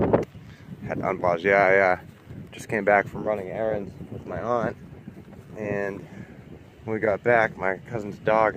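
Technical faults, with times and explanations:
Nothing stood out as a technical problem on listening to the audio.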